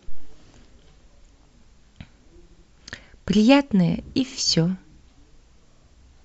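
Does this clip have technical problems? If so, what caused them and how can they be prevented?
Yes. At about 2.50 s the speech stutters: a block of roughly 78 ms, about three compressed frames, is played again twice, through to about 2.65 s, adding about 157 ms to the clip. This is repeated frames, where the same encoded data was written or sent more than once and the decoder faithfully replays it. Unlike a dropout or a jitter-buffer gap, nothing is lost; identical sound recurs. Prevent it by deduplicating frames by sequence number or timestamp before decoding.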